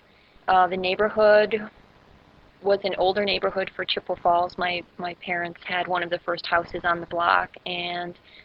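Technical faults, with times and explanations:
No technical faults detected.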